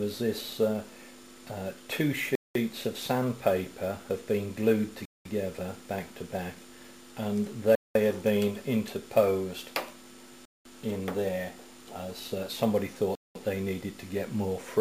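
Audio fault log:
2.35–2.55, 5.05–5.25, 7.75–7.95, 10.45–10.65, 13.15–13.35 s, gap between chunks: 200 ms silences after each 2.5 s chunk cut the sound at hard edges, shown as flat waveform sections and blank spectrogram columns.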